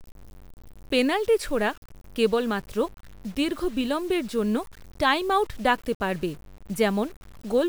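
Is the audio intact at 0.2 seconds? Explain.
No, not really. At 0.2 s, and right through the clip, the speech has the grainy, fizzy edge of low bit depth without dither. The likely cause is samples truncated to about 7 bits with no dither, so the rounding error tracks the signal instead of sitting as steady hiss. The distortion sits only around 30 dB below the speech, so quieter stretches sound rough and crunchy, and the grit shifts as the level changes.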